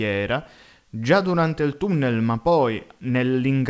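No technical faults can be heard in the speech. It comes through a call codec path that is working normally, with nothing above 8 kHz, which fits a wideband codec such as G.722.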